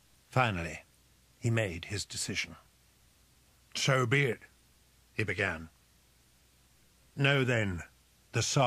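Clock drift buffer slips appear from 0.9 to 7.76 s as about seven regular clicks, one every 1.14 s. This likely comes from two devices whose clocks differ by several hundred parts per million, forcing the buffer between them to drop or repeat a few dozen samples at each slip.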